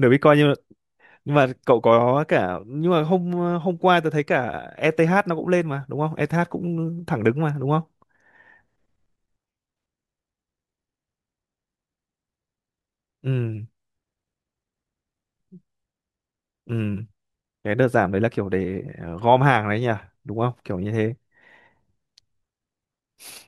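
A recording of speech, with no technical fault to be heard in it. Nothing can be pinned to any moment, so there are no times or causes to give.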